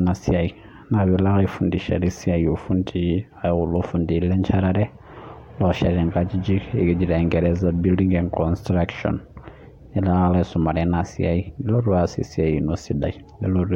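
Speech recording with no audible technical faults anywhere.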